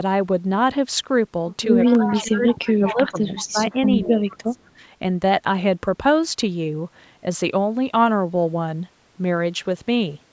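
Echo leak runs from 1.85 to 4.37 s in this speech recording: a copy of the voice returns 169 ms late, roughly 10 dB down, likely from a loudspeaker echo the far end's canceller missed. Speech suppressed in double talk hits 2.0 to 3.59 s and 4.04 to 4.58 s, with the voice dropping by roughly 20 dB in pieces, likely because the canceller ducked both talkers during overlap.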